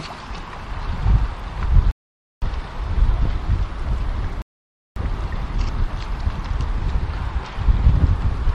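A short recording of sounds with two rebuffering stalls: the playback simply stops dead and goes silent, then picks up exactly where it left off. The first gap runs from 1.91 to 2.42 s, the second from 4.42 to 4.96 s, each adding roughly half a second of dead air. Nothing gets skipped, so the player just ran dry of downloaded audio and sat waiting for more data to arrive before carrying on.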